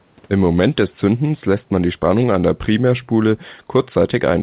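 No technical fault can be heard in this speech recording. It has passed through a WebRTC call path, and the sound has nothing above 4 kHz, which fits the telephone-band G.711 A-law codec.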